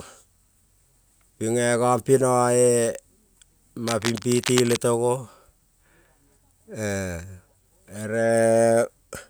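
Cable scratch noise runs from 3.87 to 4.77 s, ending just before "to go". For just under a second, dense, irregular crackling and rustling sits over the speech, roughly 10 dB below it, so it is plainly audible without burying the speech. The sound is likely from a worn cable, connector or control being moved: its contact resistance changes rapidly and unevenly, and each jump injects a small noise burst into the signal.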